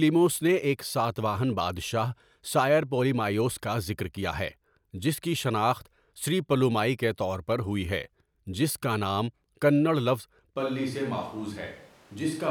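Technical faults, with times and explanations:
10.58 s to the end, switch to a distant microphone: the close microphone's feed likely dropped out and a farther pickup took over. The speech turns abruptly roomy and hollow, thinner in the bass and about 5 dB quieter, with room noise only about 25 dB below it.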